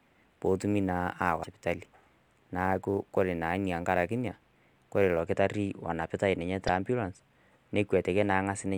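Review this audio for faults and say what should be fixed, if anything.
Sample clock jitter runs from 0 to 5.2 s, ending just before "kitari onapitai ninye te". A clock wobbling by a few microseconds mistimes samples, adding roughness around 35 dB below the signal that tracks loud, bright speech. Unlike broadband noise, it disappears in pauses. Prevent it with a stable, low-jitter converter clock.

Damaged data in a compressed stream causes a fault at 1.40 to 1.47 s and another at 6.67 s, just after "kitari onapitai ninye te". The decoder misreads corrupt frames and resyncs. Unlike dropouts, it comes from the decoder losing its place in the stream. Prevent it with checksummed, error-protected storage and transmission.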